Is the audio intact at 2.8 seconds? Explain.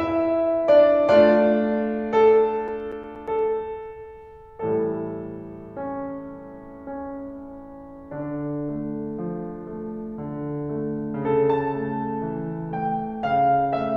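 No. At 2.8 seconds the music is broken by a run of sharp, regular ticks and tiny gaps: eight of them between 2.56 and 3.39 s, each at most a few milliseconds long, repeating eight or nine times a second. These are CD scratch ticks. A scratch or blemish on the disc destroys more data than error correction can rebuild, once per revolution, so the player patches or mutes the damaged samples each time around.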